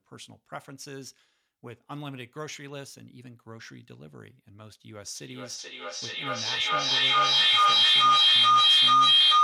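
Feedback howl begins at 5.15 s and runs to the end at 9.43 s. Sound from a loudspeaker re-enters a microphone in the same room, gaining level on each pass, so a tone around 3 kHz swells to about 20 dB above the speech, with the loop repeating roughly every 0.4 seconds.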